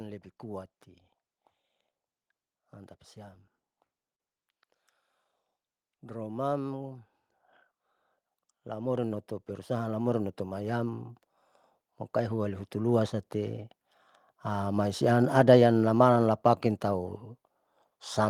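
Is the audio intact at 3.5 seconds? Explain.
Yes, the audio is intact at 3.5 seconds, with no audible fault at that point.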